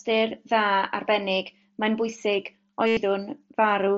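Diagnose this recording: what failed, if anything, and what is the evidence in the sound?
What failed is the Bluetooth radio link between headset and phone, audible as concealed Bluetooth headset packet loss from 2.87 to 2.97 s. For about 0.1 s the sound turns into a steady buzzy tone at full level, then warbles briefly as the real signal resumes. The receiver looped the best-matching stretch of recent waveform to fill the gap, and the 97.5 ms length fits a run of about thirteen 7.5 ms mSBC packets. On a spectrogram this shows as evenly repeating vertical stripes at constant energy, cut off at 8 kHz like the surrounding wideband audio, with a smeared seam at 2.97 s.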